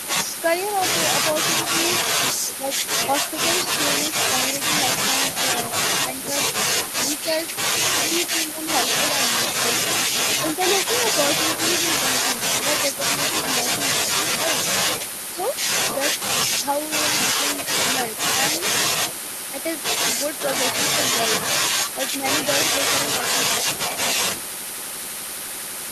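At 2.59 to 2.67 s the speech dips by about 5 dB, and between 6.03 and 15.39 s it drops repeatedly by up to about 10 dB, losing well under a second in total. This is likely speech suppressed in double talk, where the echo canceller mistook overlapping talk for echo. At 15.42 to 15.46 s a very faint scrap of the voice returns 443 ms late, roughly 30 dB down, likely an echo leak from a loudspeaker. Further brief suppression dips of about 10 dB occur between 17.94 and 19.57 s and between 21.93 and 23.56 s, each lasting only a fraction of a second in total and likely from the same double-talk suppression.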